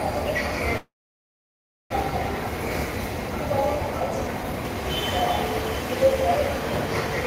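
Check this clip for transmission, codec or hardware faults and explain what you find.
Two transmission faults are present, both tied to how packets reached the receiver.

From 0.77 to 1.94 s there is a long network dropout, likely from packets arriving late or not at all. The receiver stretched the last sound into a fading buzz, then held about 1 s of silence, and the audio resumes with 0.6 s missing.

From 3.98 to 4.76 s a jitter buffer speed-up occurs: with too much audio queued, the receiver cut small pitch-period pieces repeatedly, removing about a fifth of a second. The sound runs at 130% speed without any pitch change, so it comes across as rushed.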